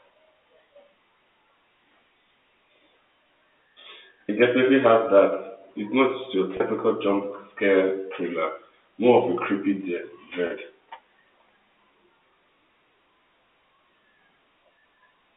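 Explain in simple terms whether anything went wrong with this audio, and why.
Packet loss with pitch repetition occurs twice: at 6.57 s, between "not just your" and "jump scare thriller", and again at 10.47 s. Each time about 30 ms of speech went missing, which fits a single lost packet. To cover the gap, the receiver replayed the last cycle of the voice's pitch, so each spot sounds like a brief, slightly buzzy held sound before the speech carries on.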